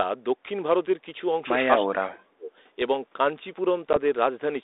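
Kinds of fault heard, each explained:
speech suppressed in double talk: The echo canceller likely took overlapping talk for loudspeaker echo and turned the near side down along with it. From 1.82 to 2.51 s the speech sinks sharply, by about 35 dB at its deepest, before recovering.
packet loss on an ADPCM call: A single lost packet, about 10 ms of audio, was replaced by silence, and the G.726 decoder's adaptive prediction and step size drifted from the sender's. At 3.93 s a hard-edged gap opens, and the speech returns unsteady until it settles by 3.98 s.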